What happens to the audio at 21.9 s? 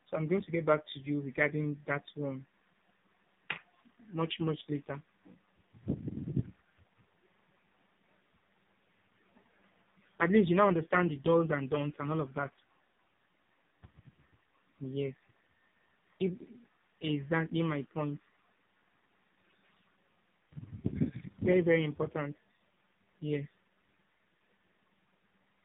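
AMR narrowband mobile codec damage is present at 21.9 s, as it is across the whole clip. The speech is rebuilt from a vocal-tract model fed by sparse pulses. This leaves nothing above 3.8 kHz and a heavily buzzy, synthetic tone that points to a bitrate near 5 kbps.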